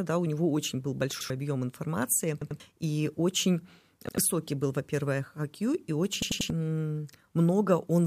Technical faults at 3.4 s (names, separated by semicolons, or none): none